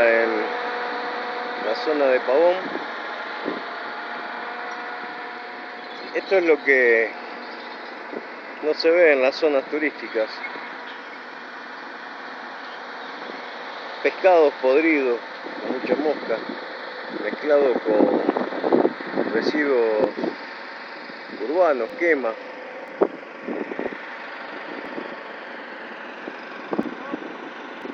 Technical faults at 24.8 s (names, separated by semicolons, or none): periodic USB or driver dropouts